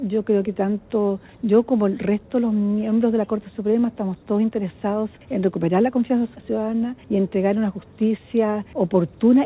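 No technical faults are present, and the audio carries the ordinary character of a telephone-style call path, with nothing above 4 kHz, which fits narrowband coding such as G.711 mu-law.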